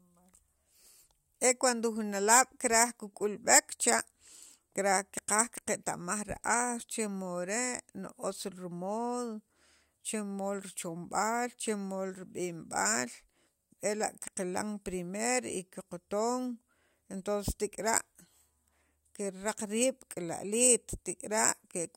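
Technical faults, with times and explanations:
No technical faults can be heard in this speech recording. There is nothing to list against any time in the clip.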